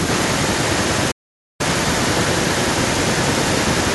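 From 0.07 s right to the end there's an echo leak: a copy of the speech trailing about 150 ms behind, only a bit quieter than the original. Likely the far end is on a loudspeaker and its echo canceller isn't removing what its mic picks up.

Then at 1.11 s everything drops out until 1.61 s, roughly half a second of dead silence, a playback stall. The player likely ran dry or got blocked for those 480 ms, and the sound just cuts off mid-flow before carrying on.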